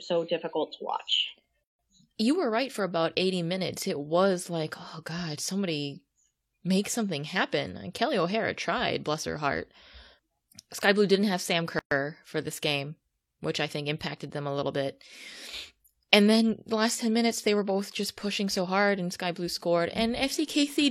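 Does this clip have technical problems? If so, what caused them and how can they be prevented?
Yes, there is a gap at a join of encoded pieces at 1.64–1.79 s, about 152 ms after "so difficult to watch", and at 11.79–11.91 s, about 124 ms before "for this game which". The joins fall every 10 s, where untrimmed encoder start delay and last-frame padding leave silence. To prevent this, trim encoder delay and padding, or encode continuously.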